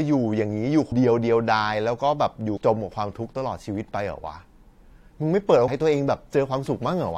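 At 0.91 s, 2.56 to 2.58 s and 5.67 s, compressed frames are skipped: the decoder drops whole 23.2 ms frames, so the speech jumps ahead by roughly 150, 100 and 150 ms respectively.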